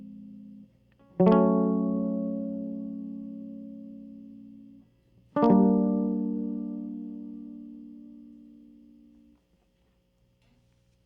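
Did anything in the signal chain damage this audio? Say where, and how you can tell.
No, nothing in this music stood out on listening as damage from any stage of the signal chain.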